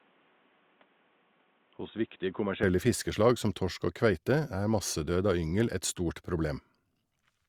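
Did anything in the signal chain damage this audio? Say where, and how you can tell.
Yes. At capture, the input was likely switched to a poorer device, such as a headset's call profile, from the start to 2.63 s. Until then the speech is dull and boxy, with nothing above 3.8 kHz, a noise floor roughly 30 dB below the signal, and a level about 5 dB lower. The full band returns at 2.63 s, just before "fiskeslag som torsk og", with no silence at the switch.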